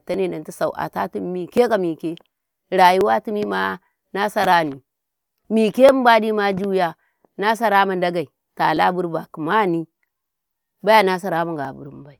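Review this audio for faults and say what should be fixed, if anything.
There's a regular click running through the speech from about 0.14 s to 11.65 s, roughly every 1.44 s, so about ten in all. That steady rhythm points to clock drift buffer slips, likely two devices whose clocks disagree by something like 700 ppm, so the buffer periodically drops or repeats a few dozen samples. Lock both devices to one shared clock, or put an adaptive resampler between them.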